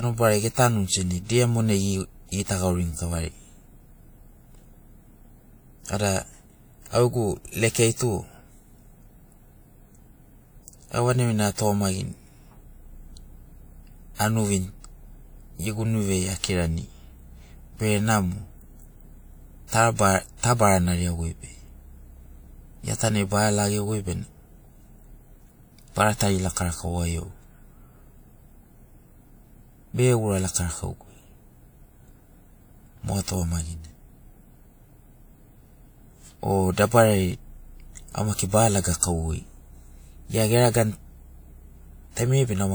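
At 38.34 to 38.39 s, pre-echo: codec noise spreads about 43 ms ahead of a sharp attack, a hiss arriving before the onset, unlike reverb, which trails after.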